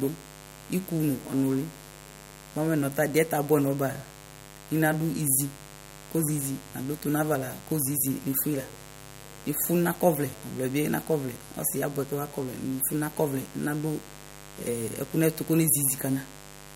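From start to finish the speech sits over a mains buzz, roughly 20 dB below the talker. Sharp switching spikes, arriving twice per 50 Hz cycle, have leaked into the signal path, stacking harmonics of 50 Hz far up into the kilohertz range. That gives a constant, raspy, edgy texture rather than the smooth low drone of plain hum, which is mostly a pure 50 or 100 Hz tone with little high-frequency content.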